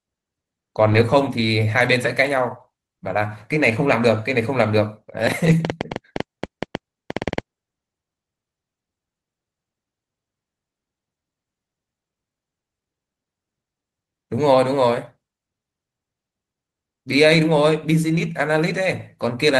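Lost packets rebuilt from error correction, 0.87 to 1.01 s: about 80 ms of audio went missing, which fits four separate 20 ms Opus packets. Each following packet carried a low-bitrate backup copy, so the decoder filled the hole with those copies instead of leaving a gap. The patch sounds rougher and grainier than the surrounding audio. The same repair recurs at 3.09 to 3.15 s and 5.45 to 5.51 s, each about 40 ms, consistent with two packets.

A train of clicks runs from 5.27 to 7.39 s: around twenty similar sharp pops at about 8 per second, spaced unevenly and standing out by roughly 15 dB over the signal. They tick through pauses as well as louder stretches, and the third repaired patch falls inside the train. The source is likely electrical interference or a faulty connection injecting repeated pulses. Across the whole clip the Opus call path leaves its usual coding noise, with content limited to about 12 kHz.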